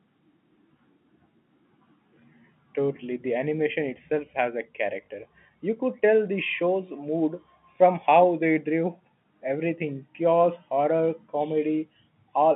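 Packet loss with last packet repeated at 5.06 s, after "animation itself has a": one lost 20 ms packet is replaced by the previous one, leaving a small blip.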